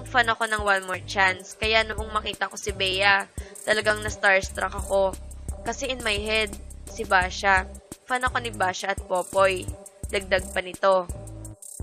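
Overlap between stream segments at 0.94, 1.92 and 6.87 s: about 7 to 19 ms of audio is trimmed at 1-second segment joins, leaving brief clicks or skips.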